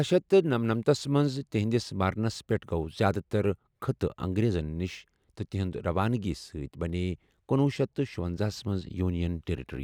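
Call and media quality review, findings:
No faults found in the signal path; the speech signal shows no technical defects needing action.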